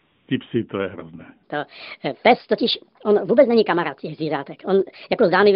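From the start to 0.28 s there is AMR comfort noise. The phone treated the opening as silence and sent no speech frames for those 275 ms. The receiver filled the gap with synthetic noise built from a rough sketch of the background level and spectrum. It sounds like a smooth, steady hiss that stops abruptly when real audio takes over. It sits inside a narrow telephone band, consistent with AMR-NB in its 12.2 kbps mode.

From 1.43 s, right after "psy to je hrozné", a section at the wrong speed runs to the end of the clip. It plays 1.39 times faster than it was recorded. Pitch rises with it, by about five semitones. The speech turns hurried and high. The jump is sudden, not gradual. The likely cause is an editor or player fitting this stretch to the wrong clock.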